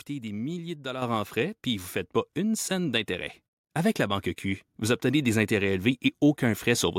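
A speech recording with two sudden level jumps. Both are a microphone volume step-up. At 1.02 s the whole signal rises by about 6 dB at once. At 3.06 s it climbs again, by about 2 dB. Voice and background noise rise together, so the change sits before any processing of the speech itself. Call software judged the microphone too quiet. It then raised the device's input volume in discrete steps, not gradually.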